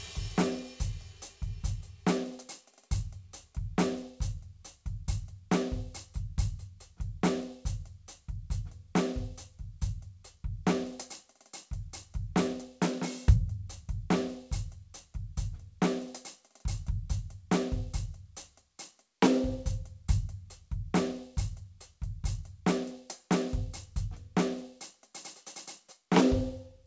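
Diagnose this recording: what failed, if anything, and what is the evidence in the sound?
Nothing in this music recording points to a failure at any stage; the content above 8 kHz is missing, as expected from the wideband call codec it passed through, and the sound carries that codec's ordinary coding character with no dropouts, glitches or distortion.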